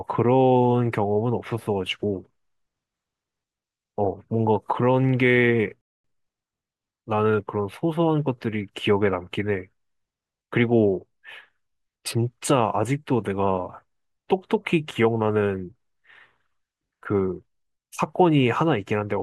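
At 5.81 s the speech drops into silence for about 0.23 s, a playback stall, most likely the player running short of data or having its output thread blocked. The sound resumes at 6.04 s.

From 6.04 to 6.50 s comes time-compressed catch-up, as the player trims its backlog by removing small slices and cross-fading across the joins. Speech runs about 1.5 times faster but keeps its normal pitch, which sets it apart from a sped-up resample that would raise the pitch.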